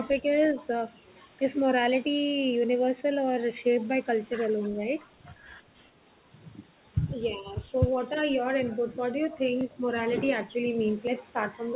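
Three short dips in level show up at 0.43 to 0.64 s, 4.73 to 4.81 s and 7.35 to 7.55 s. In each, the sound drops by about 5 dB, for roughly 150 ms in the first and third and around 70 ms in the second. That pattern is most likely speech suppressed in double talk: the echo canceller couldn't tell this talker apart from loudspeaker echo while the far side was also speaking, so it pulled the whole signal down for a moment.

Later there are two quick skips, at 9.61 s and 11.07 s, each a small jump in the sound with no gap of silence. These sound like a dropped buffer (overrun). The capture side didn't read its samples in time, a slice of roughly 10 ms was overwritten, and the audio on either side of the missing piece got butted straight together. The whole clip tops out at 4 kHz, as you'd expect from a narrowband call codec like G.711.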